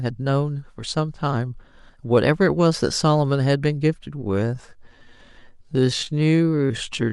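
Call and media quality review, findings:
Time-stretched section, 4.13 s to 7.12 s: speech abruptly slows to 0.58x pace, pitch unchanged. Likely a time-stretch stage padding audio to length by repeating short pieces. Unlike sample-rate mismatch, pitch does not drop.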